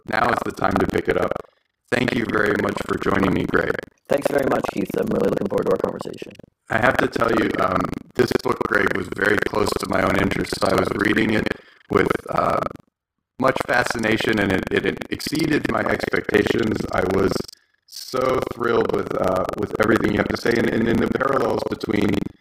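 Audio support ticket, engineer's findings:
Buffer tearing, present for the whole clip. Robotic rattle over the speech at 23.4 Hz, heard only while there is signal. The rate fits a 2048-sample ring buffer. Writer and reader pointers have slipped and cross each period. About a third of each buffer replays audio roughly 150 ms stale, with hard joins on both sides. Probable component: the audio driver or ring-buffer pointer handling.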